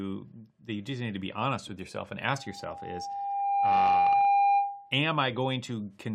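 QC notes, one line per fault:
2.25–5.03 s, loudspeaker feedback squeal: just after "honest with yourself and", a steady 800 Hz tone rises over about a second and a half into a howl roughly 10 dB above the speech. The microphone is hearing its own loudspeaker, and around 800 Hz the loop gain tops unity.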